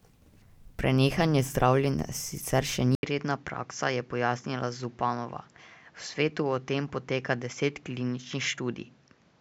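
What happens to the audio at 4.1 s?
At 4.1 s the recording is already running through a likely input switched to a poorer device, which took over at 2.95 s after an 80 ms silence and stays in use to the end. This narrower device passes nothing above 7.6 kHz, so the speech sounds duller, somewhat quieter, and carries a new, faint background noise.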